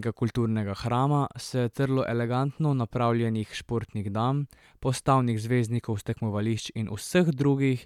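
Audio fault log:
Nothing to log here, since this speech clip has no technical faults to point to.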